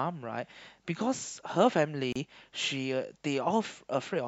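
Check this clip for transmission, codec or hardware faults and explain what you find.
One fault is present in this speech: a gap at a join of encoded pieces, from 2.12 to 2.16 s. The audio was encoded in separate sections and joined without trimming. Each section kept the encoder's start-up silence and the padding on its final frame, so about 31 ms of silence sits at the join. The speech cuts out abruptly, with edges softened by the codec, then resumes exactly where it stopped.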